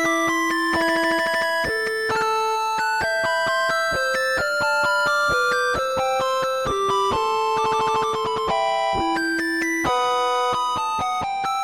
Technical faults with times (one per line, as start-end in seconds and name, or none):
none